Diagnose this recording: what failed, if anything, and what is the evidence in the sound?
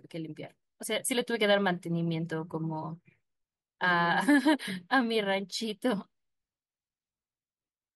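No fault is audible.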